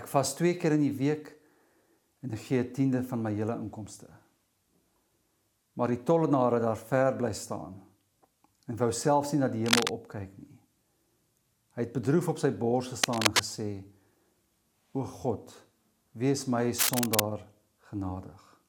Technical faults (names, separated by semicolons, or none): cable scratch noise